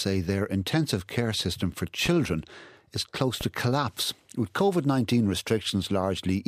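At 2.06–2.09 s and again at 3.41–3.45 s, a single loud pop rises roughly 10 dB above the speech, likely a voltage pulse from a switch, plug or static; unlike a dropout, the speech continues unbroken beneath it.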